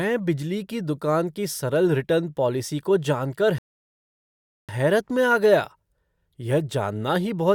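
At 3.58 s the speech halts in a rebuffering stall: the player exhausted its downloaded audio and had to wait for more data before continuing. Silence holds until 4.69 s, adding 1.10 s of dead time, and the speech then picks up exactly where it broke off, with nothing skipped. On a waveform this is a flat line across that gap; a spectrogram shows a clean, empty vertical band with no energy at any frequency.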